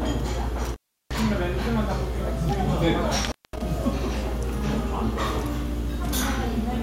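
At 0.65 s and again at 3.24 s the audio suffers an intermittent contact, a loose cable or plug briefly breaking the signal path. The first break lasts about 0.35 s, the second about 0.21 s, each cutting the sound out with crackle as the contact scrapes open and shut. What separates this from a clean digital dropout is that scratchy, ragged edge and the uneven gap lengths, rather than neat, silent holes.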